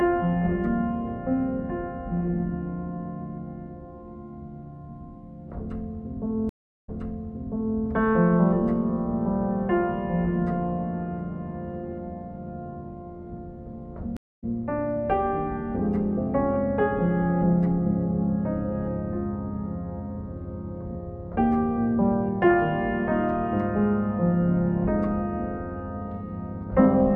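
A sound clip with two stream reconnects: 333 ms gap at 6.49 s, replaying about 0.97 s, and 203 ms at 14.17 s, jumping roughly 0.2 s ahead.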